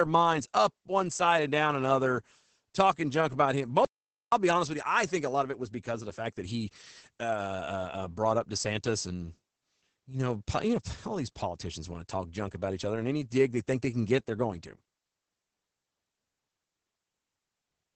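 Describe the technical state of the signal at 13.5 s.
Opus voice compression is present at 13.5 s, as it is across the whole clip. The speech passes through Opus's SILK linear-prediction coder, and the heavy damage fits a bitrate around 10 kbps. At that rate the coder limits the band to wideband, so nothing remains above about 8.6 kHz, and it codes the excitation coarsely in 20 ms frames. The speech sounds muffled and hoarse, with a slightly robotic edge.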